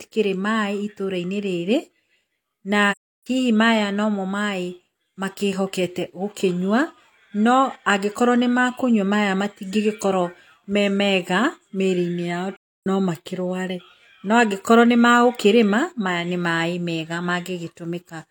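AAC frame loss with muting occurs at 2.91 s and again at 12.57 s. In each case a run of coded frames never reached the decoder, which filled the gap with silence by zeroing the spectrum. The speech fades out over the span of a frame, stays silent, then fades back in, leaving a soft-edged hole. The first hole lasts about 0.36 s, which fits eight lost frames, and the second about 0.31 s, which fits seven.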